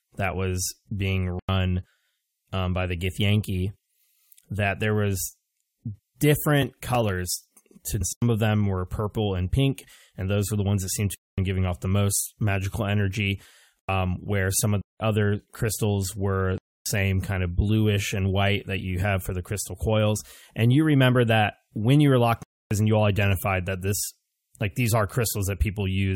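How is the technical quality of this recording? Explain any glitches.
The recording has repeated dropouts and one jump in the speech, so its technical quality is poor.

Block of digital silence, seven times: at 1.39, 8.13, 11.15, 13.79, 14.81, 16.58 and 22.43 s. The 1.39, 8.13 and 13.79 s gaps each last about 93 ms, which fits a 4096-sample output buffer that was not filled in time. The others are longer: 11.15 s (233 ms, between "the ones that seemed" and "giving off the most"), 14.81 s (186 ms, between "where some of" and "other crystals were"), 16.58 s (279 ms) and 22.43 s (279 ms, between "you were locked in" and "you all"). At each one the audio drops straight to silence and returns with no fade, leaving an audible hole.

Stream segment skipped at 8.0 s: the speech jumps forward abruptly with a small blip, and part of the programme is missing. The likely cause is a stream segment that failed to load, so the player carried on from the next one.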